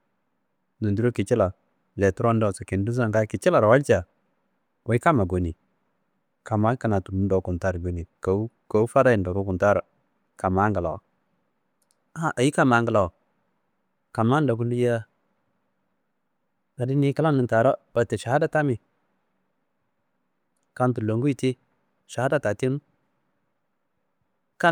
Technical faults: none

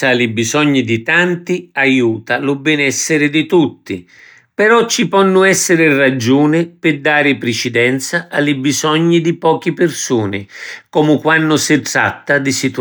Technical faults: none

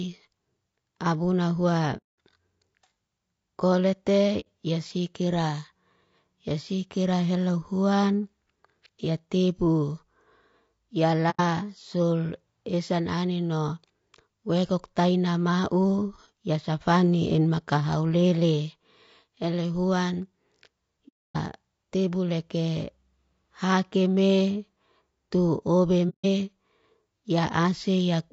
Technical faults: low-delay AAC compression; AAC frame loss with muting

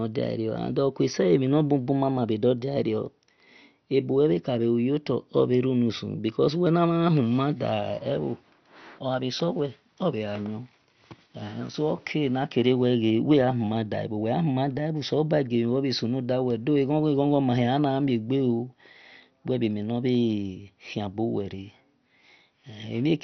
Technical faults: MP2 compression

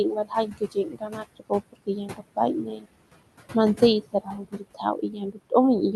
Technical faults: noise suppressor artifacts; speech cut by the noise suppressor

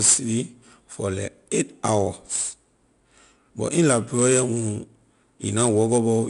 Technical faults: 4-bit ADPCM compression

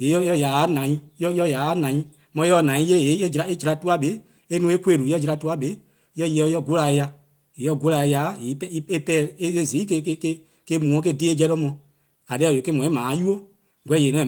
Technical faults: none

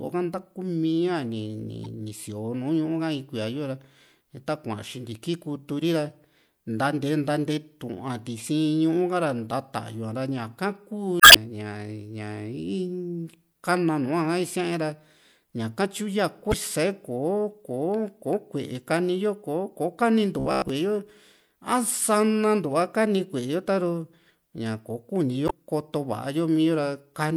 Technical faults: damaged data in a compressed stream; robotic sound from repeated short buffers

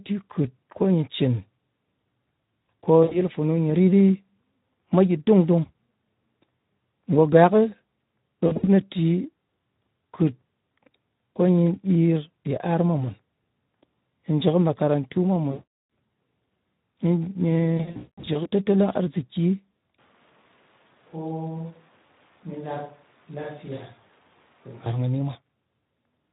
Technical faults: Speex codec; VoIP packet loss concealed by the speech codec; switch to a distant microphone

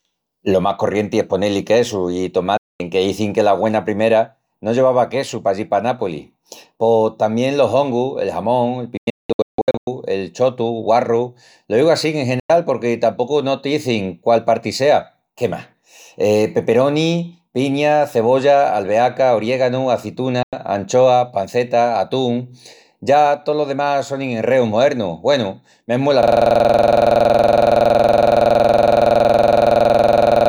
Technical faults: digital broadcast dropout; system hang loop

